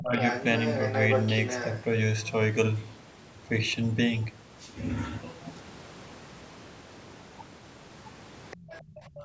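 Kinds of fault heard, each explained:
Speech suppressed in double talk: At 0.00 to 0.19 s and again from 8.56 s to the end, the talker's speech dips sharply, by around 25 dB at its deepest. That covers only a brief moment at the start but most of the final two thirds of a second. The likely cause is the echo canceller, unable to separate the talker from the loudspeaker echo while both sides spoke at once, turning everything down together.
Other side's voice leaking through: From 0.22 to 1.82 s a second voice sits in the microphone signal, only slightly quieter than the talker. Fainter scraps, far below the speech, return at 8.51 to 8.83 s and 9.16 to 9.24 s. This is likely the far end playing on the device's loudspeaker and reaching the microphone, with the echo canceller failing to remove all of it.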